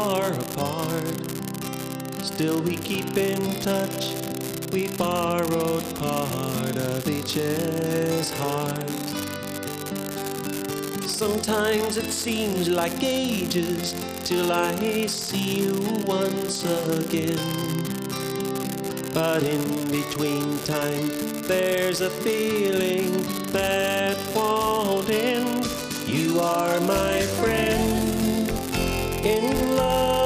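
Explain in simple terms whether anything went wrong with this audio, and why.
An unreliable data bit is at fault. One of the wires carrying the digital audio is flaky, so one bit comes out wrong at random moments. Each mistake makes an equally sized spike, heard as a constant crackly fizz from start to finish, even in the quiet gaps.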